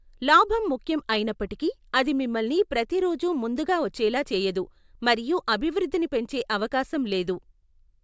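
Nothing technically wrong turns up anywhere in this bit of speech, so there's no fault to point to.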